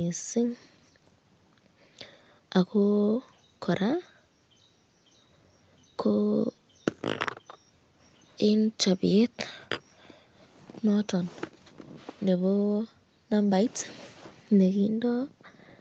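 No faults are audible in the speech; the top end stops at 8 kHz, which is what the call microphone processing and a WebRTC call path carrying Opus at around 32 kbps would give, and that band limit is expected rather than a defect.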